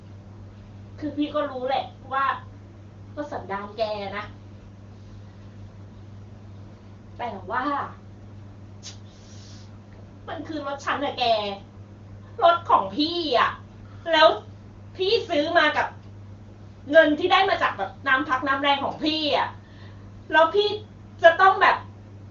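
The clip is speech carried over the AMR-WB (HD Voice) codec at 23.85 kbit/s, and nothing is technically wrong with it.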